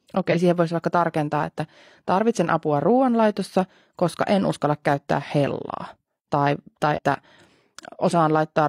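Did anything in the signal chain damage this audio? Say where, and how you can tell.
Yes. Compressed frames were skipped at the codec stage. At 0.28 to 0.37 s, just before "siihen voisi vaikka tarkentaa", and at 6.93 to 6.99 s, the speech jumps ahead by about a tenth of a second. Whole frames were missing or rejected.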